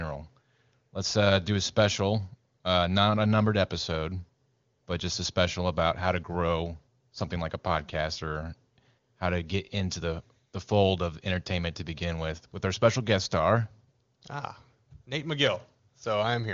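No technical faults can be heard in the speech. It carries the band-limited sound of the AMR wideband (HD Voice) codec, with nothing above about 7.3 kHz, and the coding sounds consistent with one of its top rates, such as 23.85 kbit/s.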